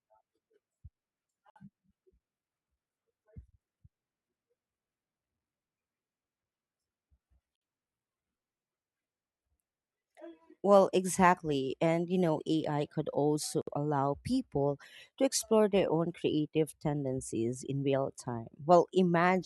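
Gaps at joins of encoded pieces occur every 6 s: 1.50–1.56 s, 7.56–7.62 s and 13.62–13.67 s, the last between "could also" and "allow people to explore". Untrimmed encoder delay and final-frame padding leave 56–59 ms silences with smeared edges, then the speech resumes.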